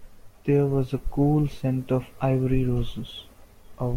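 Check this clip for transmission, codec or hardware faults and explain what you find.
Nothing in this speech clip points to a transmission, codec or hardware problem, so there's nothing to flag here.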